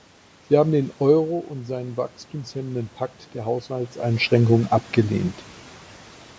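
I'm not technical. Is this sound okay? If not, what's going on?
No. Just after "haben den", from about 1.25 to 4.34 seconds, there is automatic gain rising. The speaker got quieter at the microphone, so the call's level control slowly turned the volume up to make up for it, over about three seconds. Unlike a speaker simply moving closer, where only the voice grows, here the room's background noise swells up together with the voice as the volume climbs.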